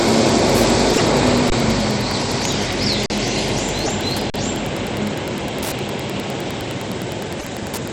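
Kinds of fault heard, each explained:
Wi-Fi interference: steady ticking throughout, about ten per second, from a 102.4 ms beacon period rectified by the circuit, roughly 20 dB below the sound.
Broken MP3 bit reservoir: at 0.93–1.01, 3.84–3.89 and 7.39–7.45 s the audio jumps ahead with a short garbled stretch, likely 24 ms frames decoded from the wrong borrowed bytes.
Underrun with held sample: at 1.5 s (20 ms), 3.06 s and 4.30 s (40 ms each) the buffer ran empty and the waveform held flat, then resumed where it stopped, softly.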